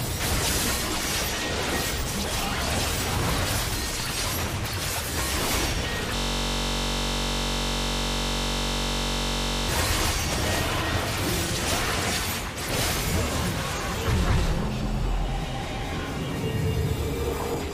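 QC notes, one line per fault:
6.16–9.69 s, system hang loop: one 21.33 ms slice repeats exactly, about 165 times, then normal audio resumes. The system froze while playback kept cycling one buffer, which fits a 1024-sample buffer. Short cycles fuse into a steady buzz at 46.9 Hz.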